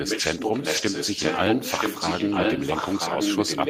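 From 0.05 s to the end, a copy of the speech returns about a second later, roughly as loud as the original. This is likely an echo leak from a far-end loudspeaker.

At 0.77 to 0.83 s and 2.27 to 2.41 s, the speech turns briefly rougher and noisier without any gap. These are lost packets rebuilt from error correction, covering about 40 ms and 80 ms.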